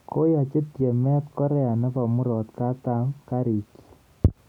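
Nothing goes wrong anywhere in this bit of speech, so there's no technical fault to point to at any moment.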